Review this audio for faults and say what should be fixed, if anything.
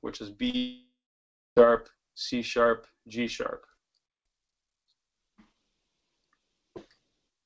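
At 0.50 to 0.55 s there's a short concealed packet loss. About 40 ms of audio didn't reach the decoder in time, so it stretched the last bit of sound across the gap, which gives a quick smear before blending back in. More forward error correction or a slightly deeper jitter buffer should cover this.

Right after that, from 0.57 to 1.58 s, the sound turns into a fading buzz or hiss, then about 0.59 s of silence, and it picks up again with roughly a second missing. That's likely a long network dropout, where the receiver ran out of real audio and could only extend the last sound briefly. The fix is on the network side: check link stability and packet loss along the route.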